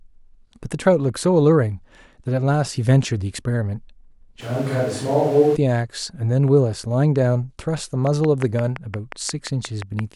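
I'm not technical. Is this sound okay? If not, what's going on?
No. From 4.42 to 5.54 s the speech turns roomy and hollow, with more background noise, then snaps back. That's a switch to a distant microphone, likely because the close one dropped out. From 8.07 to 10.00 s there's a train of clicks: about ten sharp ticks at a steady 5.7 per second, standing out above the speech, likely from electrical interference or a faulty connection.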